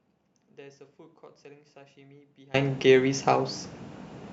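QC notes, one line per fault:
0.00–2.54 s, audio dropout to a faint residue: already under way when the clip opens, only a faint leak about 30 dB down, likely a lost feed on a still-live path.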